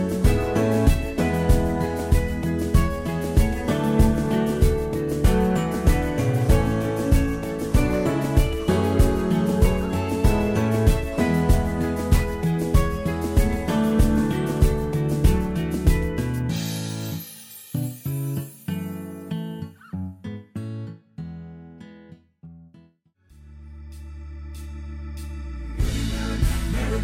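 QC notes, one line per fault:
No faults heard anywhere in this clip.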